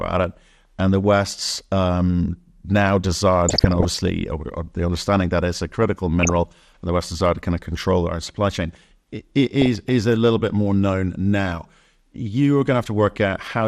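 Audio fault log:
throughout, MP2 compression: Likely a low-rate MPEG Layer II encode, around 80 kbps, starved of bits so that upper sub-bands drop out and flicker while the rest are coarsely quantised. The speech sounds dull throughout, with a plainly audible gurgling, granular roughness.
3.49–4.08 s, 6.20–6.36 s, 9.61–9.89 s, DAB burbling: Bit errors, under one percent, slip past error correction into the MP2 data, corrupting samples so short blips of noise appear in single sub-bands. Short noise blips follow "um now desire", fall between "that it's a critical" and "and the", and precede "is a little bit".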